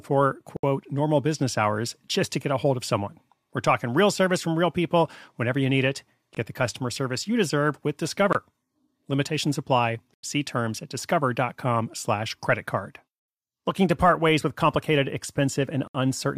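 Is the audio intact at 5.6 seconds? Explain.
Yes, the speech at 5.6 s plays through cleanly, with no dropout, click, distortion or other fault at that moment.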